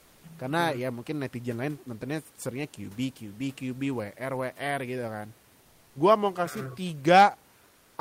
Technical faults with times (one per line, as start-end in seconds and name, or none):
5.65-5.95 comfort noise in place of the background
7.69-7.93 comfort noise in place of the background